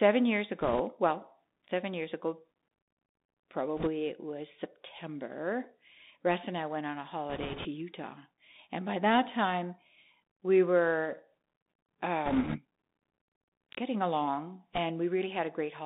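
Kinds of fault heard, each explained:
Bluetooth CVSD headset codec, throughout: the speech sits in a narrow band of about 200 Hz to 3.7 kHz, which fits a 64 kbps one-bit delta coder whose adapting step trails loud, fast high sounds, leaving scratchy s sounds over a steady grainy hiss.
Bit errors on a Bluetooth voice link, at 0.61 to 0.81, 3.77 to 3.88, 7.30 to 7.67, 12.26 to 12.59 and 14.73 to 14.78 s: a few percent of flipped bits bring a rushing crackle but no loud clicks, since each bit barely moves the waveform and the error decays.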